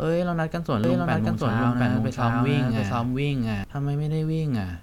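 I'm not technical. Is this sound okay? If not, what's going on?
No. A doubled audio track, likely from the speech being recorded twice: from 0.84 to 3.64 s, an equally loud copy trails about 0.7 seconds behind, then cuts off abruptly.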